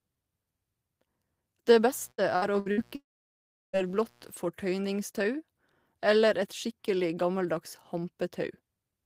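From 1.67 s to 4.32 s a mains buzz sits under the speech, about 35 dB below it. Switching spikes entering the signal path twice per cycle of a 60 Hz supply produce a dense ladder of harmonics running well up into the kilohertz range. The result is a steady, raspy buzz rather than a pure hum. It is present at those times, which points to interference reaching the signal path during that window.

Inside that window, between 2.11 s and 2.80 s, repeated packet loss gives the sound a robotic quality. Several short holes follow one another closely, the longest about 65 ms, and together they add up to roughly 240 ms of missing audio. The receiver covers each hole by stretching the preceding sound, so about a third of this span is synthetic fill. It comes across as choppy, with fragments clipped out.

At 2.95 s a long network dropout begins and lasts until 3.76 s, about 0.78 s of audio that never arrives. 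The gap is first bridged by a smeared continuation of the last sound, which fades quickly. Roughly 0.7 s of near silence follows. Sound resumes at 3.76 s with the lost portion simply absent, and the likely cause is an interruption in the network link rather than anything at the source.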